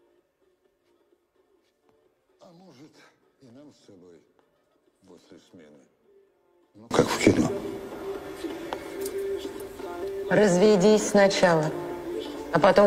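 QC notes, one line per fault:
0.00–6.91 s, one channel inverted: for the first 6.91 s the audio sits about 31 dB below the rest of the clip, leaving only a weak residue that returns to full level at 6.91 s. This is likely one stereo channel carried with reversed polarity, so whatever both channels shared cancelled when they were folded to mono, and only the difference between the two channels survived.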